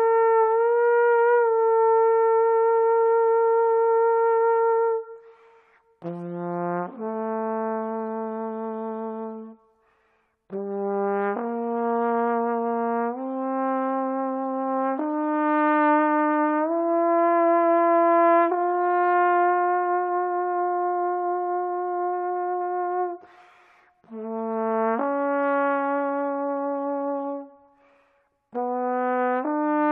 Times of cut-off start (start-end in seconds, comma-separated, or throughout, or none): none